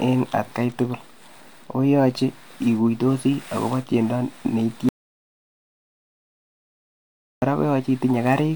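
At 4.89 s the speech cuts off abruptly into dead silence, with no room tone, until it resumes at 7.42 s, about 2.5 s lost. This audio dropout to silence likely came from the input path failing or muting while the recorder kept writing silence.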